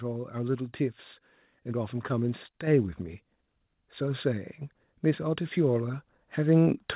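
A speech recording with one fault. At 2.67 s the microphone volume steps up. Voice and background jump together by about 5 dB, in one instant step. The call software judged the input too quiet and raised the device's gain. Because the change happens at the microphone, the noise floor rises with the speech. The sound runs through a call path with nothing above 4 kHz, which points to a narrowband codec such as G.711.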